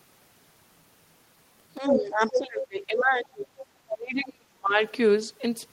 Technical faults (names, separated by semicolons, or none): speech suppressed in double talk; other side's voice leaking through